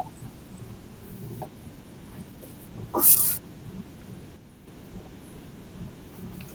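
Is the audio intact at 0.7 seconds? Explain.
Yes, at 0.7 seconds the speech comes through intact, with no fault at that moment.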